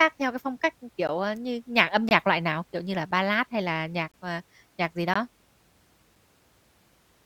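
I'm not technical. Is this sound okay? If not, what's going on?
No. A gap between stream segments appears at 1.07, 2.09 to 2.11, 3.11, 4.12 to 4.14 and 5.14 s: each second, mismatched segment timing inserts a brief hard-edged silence, 5 to 22 ms, into the speech.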